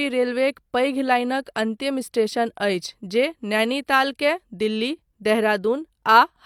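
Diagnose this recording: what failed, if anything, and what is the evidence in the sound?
Nothing failed; no fault is audible anywhere.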